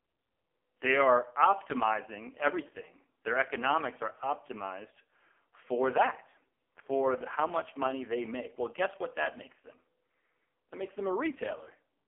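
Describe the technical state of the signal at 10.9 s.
At 10.9 s the speech carries the AMR narrowband mobile codec fault, which runs through the entire clip. The codec rebuilds the voice from a vocal tract model fed by a pitch predictor and a few pulses per 5 ms frame. Here the damage is heavy, pointing to the lowest mode, around 4.75 kbps, so the voice sounds buzzy and synthetic. The band is confined to about 300 Hz to 3.4 kHz, with nothing above 3.4 kHz.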